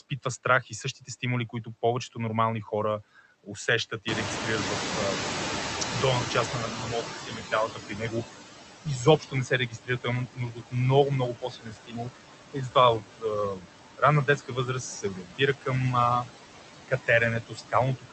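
Speech running through a call path, and across the whole clip you get noise suppressor artifacts: the suppressor pulls the background down by about 15 dB frame by frame, so the noise sinks between words and swells back under them. The top end stops around 8 kHz, which fits an Opus call link. The second problem is speech cut by the noise suppressor, where parts of the talker get mistaken for noise and ducked along with the background. It happens from 0.0 to 1.67 s, just before "повечето нормални хора усещат", then 6.52–8.25 s, 8.84–10.75 s, 11.32–13.65 s, 13.98–15.69 s and 16.88 s to the end, with dips of about 12 to 18 dB that leave endings and soft consonants swallowed. The worst of these, at about 18 dB, fall at 8.84–10.75 and 11.32–13.65 s. Finally there's the noise suppressor catching up. Right after "повечето нормални хора усещат" the room noise jumps by about 18 dB around 4 s, and the suppressor's noise estimate lags. 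From 4.07 to 7.72 s the louder noise comes through with less reduction than usual, then gradually sinks by about 12 dB as the estimate adapts over roughly 3.65 s.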